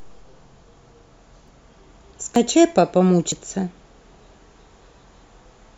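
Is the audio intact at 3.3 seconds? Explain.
No. At 3.32 s the speech jumps abruptly, skipping roughly 40 ms of sound with no gap of silence in its place. This is a dropped buffer (overrun), likely caused by the recording software failing to read a block of samples before the audio hardware overwrote it. The audio on either side of the missing block is spliced directly together, which produces the sharp discontinuity and the audible skip forward.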